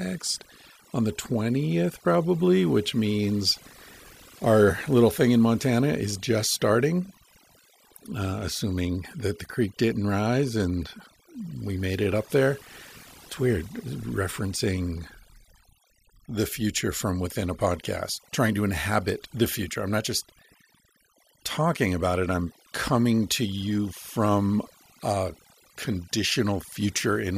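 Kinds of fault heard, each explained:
Overdone noise removal: noise reduction applied far too aggressively across the whole speech clip, cutting individual frequency bands that sit near the estimated noise floor, so the background drops and breaks up into twinkling specks while quieter speech detail is stripped.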